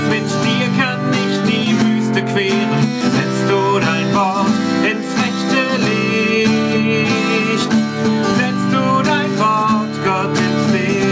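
Right from the start and all the way through, there's gain pumping. The level keeps lurching, a swing of around 10 dB. It's likely the input gain was set far too hot and a fast limiter or compressor is clamping down on each peak, so everything sounds squashed. The top end stops at about 8 kHz, which fits a wideband call codec like G.722.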